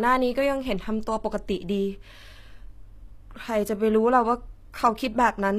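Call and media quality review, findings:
Speech, whole clip: s sounds gritty and lispy, treble synthetic, nothing above 14.9 kHz. Likely HE-AAC compression, fits a low bitrate around 24 kbps. Treble rebuilt by spectral band replication, harmonics misaligned. Unlike plain low-pass, treble present but wrong.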